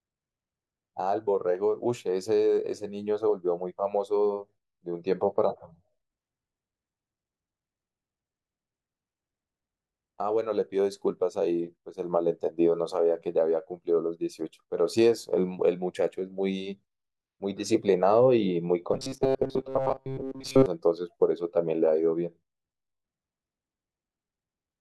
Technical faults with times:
18.93-20.66 robotic sound from repeated short buffers

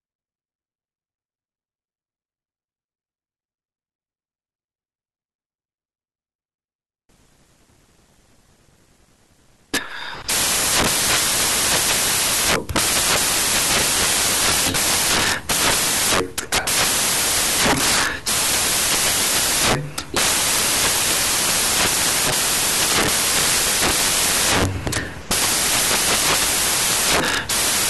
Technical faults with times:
7.09-27.89 samples built from the wrong bytes

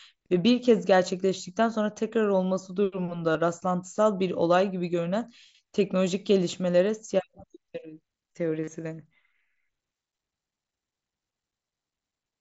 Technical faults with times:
3.32-3.35 concealed Bluetooth headset packet loss
8.64-8.68 concealed Bluetooth headset packet loss

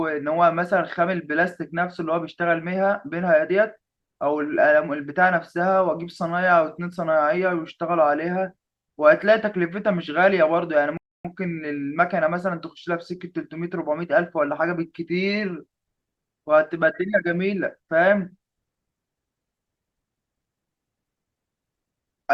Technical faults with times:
10.97-11.25 rebuffering stall

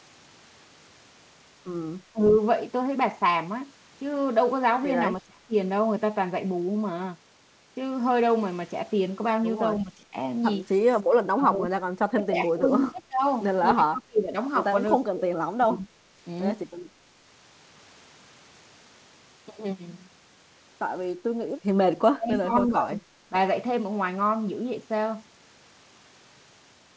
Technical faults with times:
2.13-2.20 speech suppressed in double talk
5.20-5.53 speech suppressed in double talk
9.83-10.14 speech suppressed in double talk
11.34-14.36 speech suppressed in double talk
12.98-13.02 echo leak
14.99-15.97 speech suppressed in double talk
22.13-23.35 speech suppressed in double talk

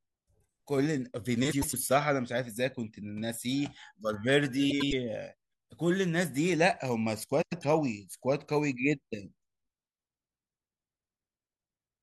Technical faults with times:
1.51-1.74 frames out of order
4.70-4.93 frames out of order
7.41-7.64 frames out of order

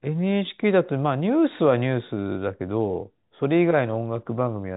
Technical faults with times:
none

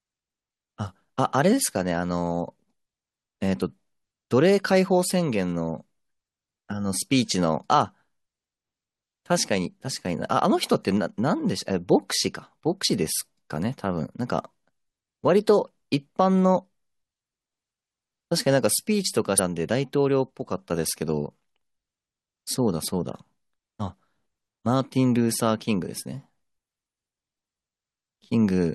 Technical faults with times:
12.83 damaged data in a compressed stream
19.38 damaged data in a compressed stream

